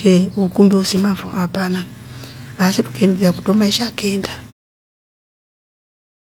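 Nothing technically wrong can be heard in this speech recording. Near the end the level fades smoothly out, finishing at 4.53 s, with no click or hard edge.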